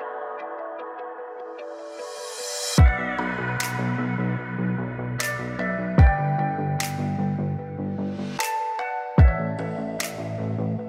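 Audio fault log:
No problems stood out when listening to this recording.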